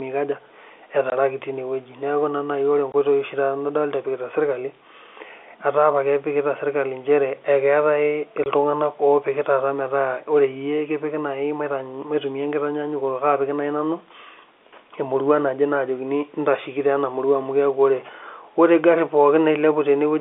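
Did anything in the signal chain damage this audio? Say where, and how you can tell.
Yes, the network stage did. There are three short silent holes in the speech, at 1.1, 2.92 and 8.44 s, each 20 ms long with hard edges. Each gap sounds like one lost 20 ms packet that the receiver filled with silence instead of concealing it.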